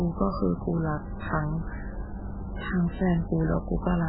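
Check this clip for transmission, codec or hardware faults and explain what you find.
One fault is present, and it runs the whole way through. The speech sounds watery and swirly, with metallic chirps on s sounds, smeared attacks, and nothing above 4.8 kHz. The likely cause is heavy MP3 compression: starved of bits, consistent with roughly 8 kbps, the encoder cuts the treble and lets weak frequency lines flicker between frames.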